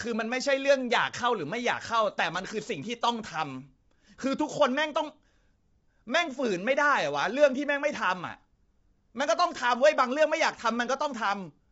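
From start to finish the speech has a rough, grainy texture, and nothing survives above 7.8 kHz. The likely cause is low-delay AAC compression (AAC-ELD) at a rate that fits roughly 24 kbps, where short frames leave too few bits to hold each pitch harmonic cleanly. On a spectrogram the harmonic stripes look smeared, with noise filling the gaps between them, and a flat ceiling cuts across at 7.8 kHz.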